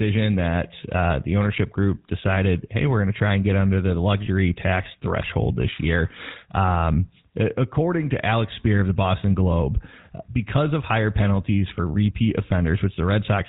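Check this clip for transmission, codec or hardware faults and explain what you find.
The speech is degraded by one codec fault across the entire clip. Throughout, GSM full-rate coding rebuilds speech from a vocal-tract model and sparse pulses and discards everything above 4 kHz, leaving it plainly buzzy and gravelly.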